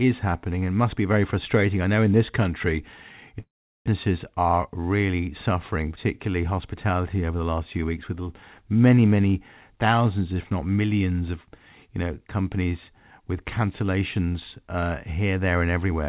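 The clip is speech carried over a narrowband call path, with nothing above 4 kHz on the spectrogram, which fits G.711 mu-law at 64 kbps. From 3.40 to 3.90 s there is what sounds like a long network dropout, likely from packets that never arrived. The last sound is stretched into a fading buzz or hiss, then about 0.39 s of near-silence follows. On the waveform this shows as a decaying smear and then a flat trace. On the spectrogram the harmonics blur and then the band goes empty. Speech resumes with roughly 0.4 s missing, and the timing shifts by around 50 ms. From 4.45 to 4.69 s a jitter buffer speed-up plays the speech at 115% speed, cutting about 50 ms by removing short pitch-period pieces in a row. Pitch stays the same, but the words sound hurried. The spectrogram shows syllables squeezed closer together with unchanged harmonic spacing, and the waveform shows small splice points where whole cycles were cut out.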